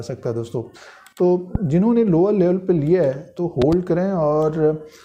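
A loud pop lands at 1.55 to 1.58 s, about 10 dB above the sound, and a double pop follows at 3.62 to 3.75 s, peaking near 15 dB higher. The likely cause is a sudden voltage step, such as static or a switch, jolting the signal while the audio continues beneath.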